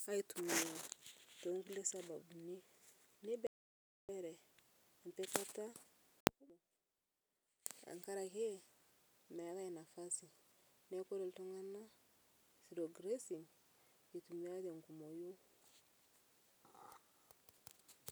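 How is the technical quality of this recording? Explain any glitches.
There's one real glitch here. At 3.47 s the speech drops out to dead silence until 4.09 s, so about 0.62 s is simply gone. That's an audio dropout to silence: the input was likely lost briefly while zeros kept being written, so even room tone vanishes.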